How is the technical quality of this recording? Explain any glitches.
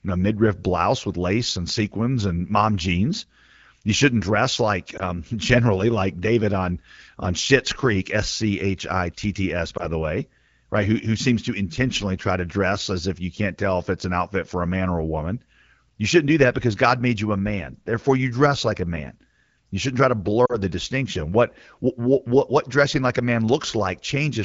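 The speech comes through an AMR wideband (HD Voice) link with light coding damage, which fits roughly 12.65 kbit/s, and it has three short glitches from lost AMR speech frames. At 4.97–5.01 s after "shouldn't dress like", 9.77–9.86 s before "the way right", and 20.46–20.58 s between "shouldn't try to" and "the distinction", the decoder patched over missing data by repeating the last good pitch and vocal tract settings at falling level. The first two sound like a brief dip or warble and fit a single 20 ms frame. The third drops toward near silence and fits two frames, about 40 ms.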